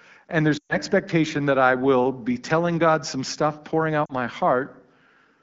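Lost AMR speech frames in this speech recording occur at 0.57 to 0.75 s and 4.06 to 4.12 s. The decoder conceals the lost frames by replaying the last good pitch and vocal tract settings at falling gain. The longer gap drops to near silence within two frames, and the shorter one dips briefly. Both are heard through clear, lightly coded AMR-WB at 12.65 kbit/s.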